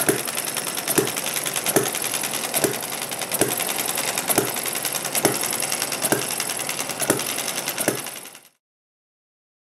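Nothing here sounds wrong; the audio just eases out in an ordinary editor's fade from around seven and a half seconds until it's gone at about 8.62 s.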